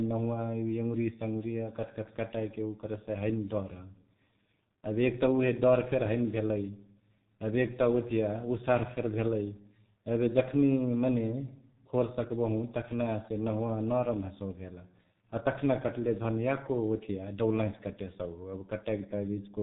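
From start to finish the speech carries heavy G.723.1 codec damage. The codec models the voice in 30 ms frames with very few bits, which fits its roughly 6 kbit/s mode. Nothing above 3.8 kHz gets through, so the sound is muffled and boxed-in. Because the voice model updates so slowly, the tone turns hoarse and buzzy, and consonants smear into the vowels around them instead of landing crisply.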